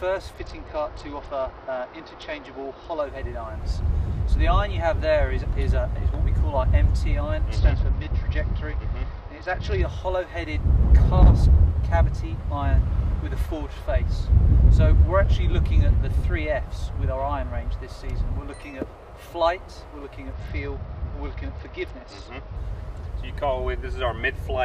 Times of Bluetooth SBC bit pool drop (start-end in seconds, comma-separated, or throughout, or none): 0.34-3.01, 7.54-9.81, 20.33-22.56